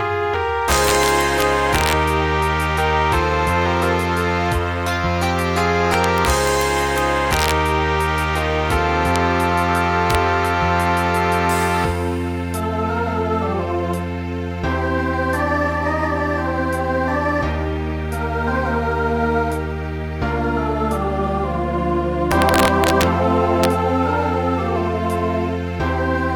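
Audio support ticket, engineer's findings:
Integer overflow: violent sign-flip cracks on loud peaks, harsher than clipping. At 0.71–1.93 s, 5.94–6.61 s, 6.98–7.51 s, 9.16 s, 10.11–10.15 s, 22.32–23.03 s and 23.64 s. Peaks only about 0 to 3 dB over full scale, worst near 22–23 s. Likely a gain or mix stage summing in fixed point without saturation, so overshoot wraps to the opposite rail. Check for a clamp before the int conversion.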